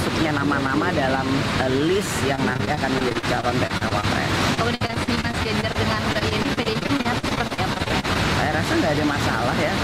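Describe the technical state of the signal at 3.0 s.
At 3.0 s you're right in a stretch of repeated packet loss (robotic sound) running from about 2.35 to 4.05 s. Lots of short dropouts, none longer than 40 ms, get patched by stretching the previous sound, so roughly a fifth of that span comes out choppy.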